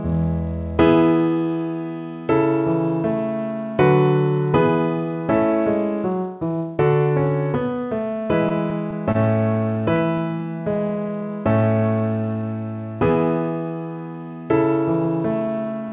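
From 8.28 to 9.18 s, and again from 9.54 to 10.22 s, there are scattered short gaps: a handful of lost or late packets, around five in the first stretch and about four in the second. Each was only a few tens of milliseconds at most. The receiver filled every hole by extending the preceding sound, so nothing falls silent. You hear brief ticks and small smears rather than dropouts, which separates this from a real cut in the signal.

From 10.39 to 12.43 s comes a jitter buffer slow-down. The receiver, short of buffered audio, repeated single pitch periods and slivers of pauses over and over, stretching this two-second span by 116 ms. Playback runs at 95% speed with the pitch unchanged, so sounds feel drawn out. It differs from a tape-style slowdown, which would also drop the pitch.

From 15.05 s to almost the end, at 15.89 s, the opposite happens: a jitter buffer speed-up. Holding more audio than it wanted, the receiver trimmed tiny pitch-period-sized pieces again and again, cutting roughly 70 ms. 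The passage plays at 108% speed yet keeps its pitch, so it sounds hurried rather than chipmunk-like. All of this sits on narrowband call audio with nothing above 4 kHz, as expected from G.711 mu-law coding.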